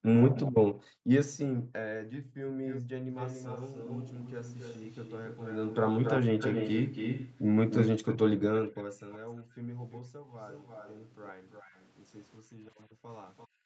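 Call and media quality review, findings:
Background gated by the echo canceller: room tone dips at 0–0.07 s (about 40 dB), 0.76–2.55 s (about 40 dB), 9.44–9.57 s (about 18 dB), and 12.4 s to end (about 28 dB). AEC suppressing the mic during far-end playback.

Echo leak: delayed speech copies at 0.35–0.44 s and 1.26–1.38 s (389 ms delay), 2.66–11.91 s (278 ms), and 13.37–13.48 s (341 ms), about 10 to 30 dB below speech. Likely residual from far-end loudspeaker pickup.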